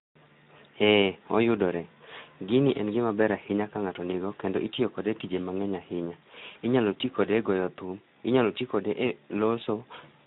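Speex codec damage runs through the whole of this speech recording. The coarse, hoarse and noisy texture fits a low-rate CELP encode around 11 kbps, where too few bits describe the excitation, so voiced sounds lose their clean harmonic structure. VoIP packet loss concealed by the speech codec appears from 6.51 to 6.59 s, right after "kode tije mang'eny ahinya". About 40 ms of audio is missing, consistent with two lost frames. The decoder extends its last pitch and filter into a short, fading stretch, and the voice stays weakened just after the gap.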